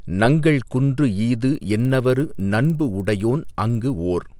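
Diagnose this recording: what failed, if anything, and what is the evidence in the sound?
The fault lies in sample-rate conversion in the driver or buffer stage: a resampler restarted on every block. From 1.5 to 3.95 s the speech carries a rough 20 Hz buzz, ticks every 50 ms that sound only while there is signal. Each 50 ms block was resampled in isolation, which fits upsampling from 24 kHz to 48 kHz, so every block edge lacks true neighbours and gets a small error. A spectrogram shows evenly spaced thin vertical lines; the waveform shows slight steps at each boundary.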